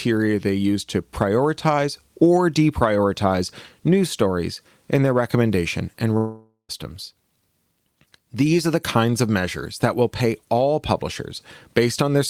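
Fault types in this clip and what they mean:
Long network dropout: from 6.17 s to 6.71 s the speech stops and the last sound is stretched into a fading buzz for roughly half a second, leaving about 0.1 s of near silence before speech resumes with about 0.52 s simply gone, likely because no packets arrived for that stretch. Unlike a brief packet-loss glitch of a few tens of milliseconds, the concealment here runs long enough to decay audibly, and the speech after the gap does not pick up where it left off.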